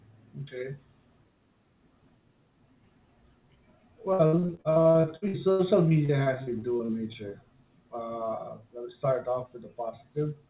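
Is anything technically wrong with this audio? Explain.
Yes: between 4.13 and 7.33 s there's repeated packet loss, a couple dozen dropouts, the longest about 74 ms, each patched by stretching the last sound, so about a quarter comes out choppy and robotic, over a call path capped at 4 kHz.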